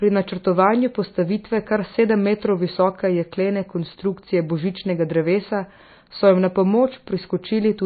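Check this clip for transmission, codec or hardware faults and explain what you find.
One fault runs throughout the speech: likely MP3 compression at a starved bitrate, consistent with roughly 24 kbps. The encoder discards everything above 4.6 kHz and drops weak frequency lines frame to frame, leaving dull, watery, swirling sound.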